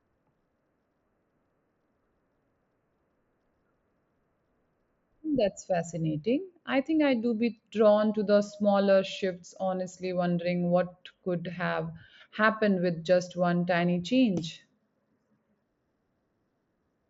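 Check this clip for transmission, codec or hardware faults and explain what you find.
No faults detected.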